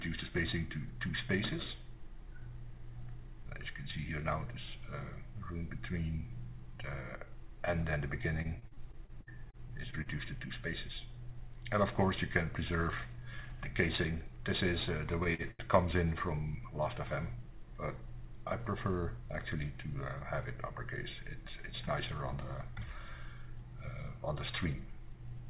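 From 8.42 to 10.08 s, repeated packet loss (robotic sound) chops the audio with a rapid series of short gaps, the longest 57 ms, each patched by repeating the last sound. About 0.24 s of material is actually lost, which gives a choppy, robotic texture unlike a simple stall. At 15.34 s and again at 15.51 s, there is a short stall from a late packet. The sound is held for 49 ms and then 80 ms with a slight buzz or dip, then resumes where it left off with nothing missing. The call path's band limit, with nothing above 4 kHz, can be heard throughout.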